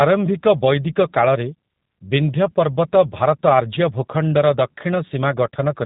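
G.729 codec damage runs through the whole speech clip, from start to finish. The codec rebuilds speech from a vocal tract filter, a pitch predictor and a few pulses in each 10 ms frame, not from the waveform itself. That leaves the voice audibly rough and somewhat synthetic, which fits the G.729A variant at about 8 kbit/s. Everything above 3.8 kHz is gone, so sibilants and the upper edge of consonants sound dull and boxed-in.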